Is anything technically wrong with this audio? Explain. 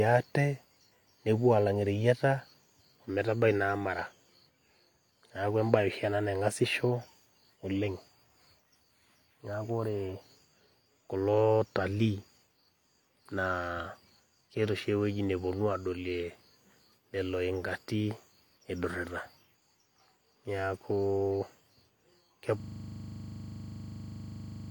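Yes. A system hang loop starts at 22.6 s and runs to the end of the clip. The computer or its audio driver stopped delivering new samples, but the playback hardware kept reading the same small ring buffer over and over. The speech gives way to a single 40 ms slice repeating about fifty times, which fits a buffer of roughly that length. At 25 repeats per second the result is a hard, rattling buzz that holds until the clip ends.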